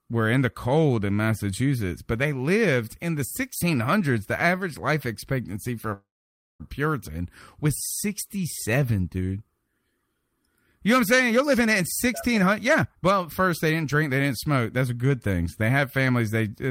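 At 5.93 s the sound stalls: the last instant smears into a brief fading buzz, then roughly half a second of silence, and at 6.62 s it resumes exactly where it stopped. This call audio freeze likely comes from late packets emptying the jitter buffer, so the receiver inserted a gap instead of losing anything.

From 11.30 s to 16.14 s the speech runs hurried, at about 114% of normal speed yet with unchanged pitch. This jitter buffer speed-up trims repeated tiny pitch-period slices to drain excess buffered delay, removing roughly 0.7 s in total.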